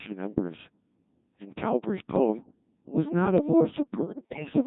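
From start to finish the speech passes through a Codec 2 vocoder, at a rate that fits about 1.6 kbit/s. Only pitch, voicing, energy and a spectral envelope survive, and the decoder rebuilds the voice from sine waves, so it sounds heavily robotic and buzzy.

From 4.02 to 4.5 s, bit errors on digital voice radio corrupt the vocoder's tiny frames, with roughly one bit in ten flipped. Each wrong bit resets a frame's pitch, level or spectrum, so the synthetic voice lurches and breaks into warbling, bleeping gibberish.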